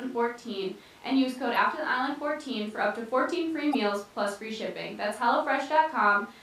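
At 1.53 to 1.56 s, and again at 3.71 to 3.75 s, the speech breaks into a brief glitch, each lasting about 40 ms. Both are damaged data in a compressed stream: a short run of the encoded bytes was corrupted, so the decoder misread the frames at those points, lost its place in the stream and had to hunt for the next valid frame header before clean decoding resumed.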